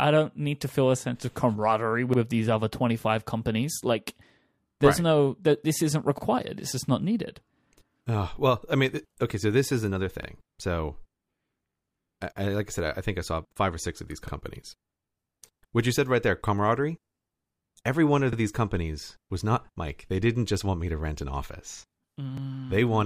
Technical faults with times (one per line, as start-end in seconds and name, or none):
2.13-2.18 overlapping chunks
6.18-6.23 overlapping chunks
10.23-10.28 overlapping chunks
14.28-14.33 overlapping chunks
18.33-18.37 overlapping chunks
22.37-22.42 overlapping chunks